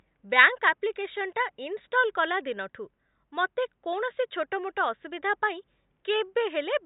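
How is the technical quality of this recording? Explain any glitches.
The technical quality of this recording is good, and there are no glitches to explain.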